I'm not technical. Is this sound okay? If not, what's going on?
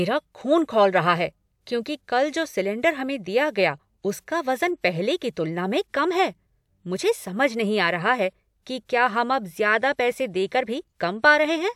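Yes, the speech recording is fine and has no technical faults to flag.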